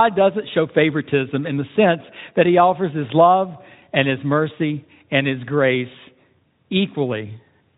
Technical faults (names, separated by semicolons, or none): none